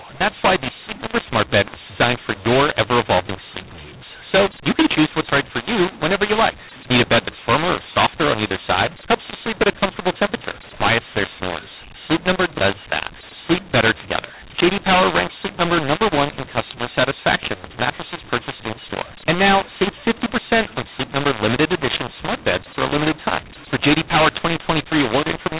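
From start to finish, the telephone stream was encoded with A-law but decoded as mu-law, a case of mu-law and A-law mixed up. Each 8-bit code therefore maps to the wrong point on the logarithmic curve, so levels come out scrambled, some too loud, others too soft. The speech sounds harsh and gritty, and the pauses fill with noise instead of silence. The narrow G.711 band, capped at 4 kHz, is still audible.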